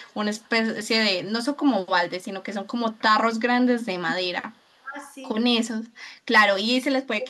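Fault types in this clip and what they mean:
echo leak: A loudspeaker echo canceller likely let some pickup through, so faint copies of the speech return about 0.44 s late, much louder near the end.
speech suppressed in double talk: During overlapping talk, the canceller likely turned down the talker too, dipping the speech roughly 15 dB for about 150 ms around 4.8 s.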